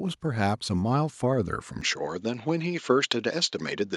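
A speech clip whose sound abruptly turns duller and slightly quieter at 1.81 s, with no gap, and stays that way to the end. This is most likely an input switched to a poorer device: everything above 7.6 kHz disappears, the level drops about 5 dB, and a faint new noise floor appears far below the signal. On a spectrogram the upper band ends in a hard ceiling from 1.81 s, and the waveform's envelope steps down there.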